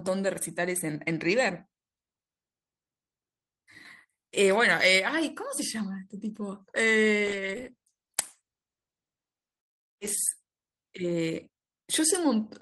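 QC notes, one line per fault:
7.08 s, dropped samples: a single sharp click where the waveform jumps abruptly, likely from roughly one sample missing from the stream.
7.33–10.39 s, call bitrate drop: the encoder rate falls from 32 to 13 kbps for about 3 s, so coarser coding makes the speech rough and muffled.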